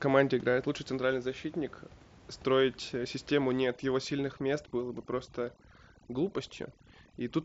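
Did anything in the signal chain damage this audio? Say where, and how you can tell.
Yes. From 3.63 s, just after "защитник строить э систему", to the end of the clip, the call-processing stage applies overdone noise removal. The background drops and breaks up into twinkling specks. The suppressor is pulling individual frequency bands far down whenever they sit close to its noise estimate. That catches the quieter parts of the speech along with the room noise, which lies about 25 dB below the speech level.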